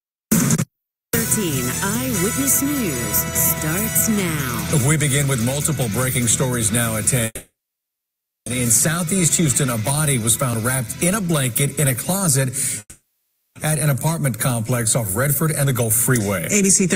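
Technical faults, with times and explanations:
7.25–8.48 s, call audio freeze: the last sound stretches into a fading buzz, then about 0.97 s of silence, and the audio resumes exactly where it stopped. Packets were likely held up and the jitter buffer ran dry. Unlike a dropout, nothing is lost; 1.21 s is inserted.
12.80–13.58 s, call audio freeze: the last sound smears into a fading buzz for most of this 0.76 s stall, with only a brief silent moment at the end. Playback then resumes with nothing skipped. The stall adds about 0.76 s of delay rather than cutting anything out.
15.01–16.21 s, jitter buffer speed-up: the audio runs about 11% fast and sounds hurried, but the pitch stays put, unlike a simple playback-rate change. The receiver trimmed many pitch-period-sized slices, around 150 ms in total, to shed the excess buffered delay.
16.63 s to the end, jitter buffer speed-up: a stronger push at about 117% speed, again with unchanged pitch, removing roughly 70 ms through repeated tiny cuts. 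The lack of any pitch rise separates this rushed delivery from resampling or tape-speed faults.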